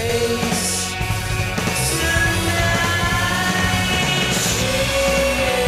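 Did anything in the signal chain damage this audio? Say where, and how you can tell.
Yes: channel delay (doubling) in the driver or buffer, throughout. A same-level copy trails by 92.9 ms, fitting a 4096-sample buffer, unlike decaying room echo.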